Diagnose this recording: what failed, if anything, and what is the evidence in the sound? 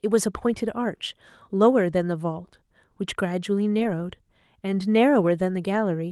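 The failure is in the network stage: a lost packet was rebuilt from error correction. Between 3.79 and 3.89 s the speech turns briefly rougher and grainier, with added noise, yet there is no gap or dropout. About 60 ms was rebuilt, which fits three separate 20 ms frames going missing. Each lost frame was replaced by the low-bitrate copy that Opus carries inside the following packet. The decoder played that coarser copy instead of the original, so continuity held while quality dropped.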